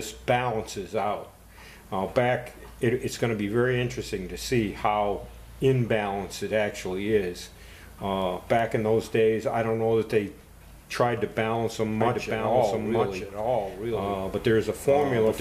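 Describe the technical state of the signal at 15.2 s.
At 15.2 s a doubled audio track is present, running from 12.0 s to the end: a dry copy trails by about a second, around 5 dB quieter, likely from a second capture path or a misaligned edit.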